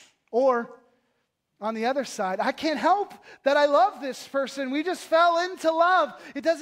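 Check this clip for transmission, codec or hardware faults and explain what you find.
No transmission or hardware faults can be heard here.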